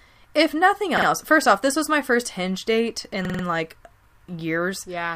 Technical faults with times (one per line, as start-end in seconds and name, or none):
0.98-1.07 repeated buffer
3.25-3.44 repeated buffer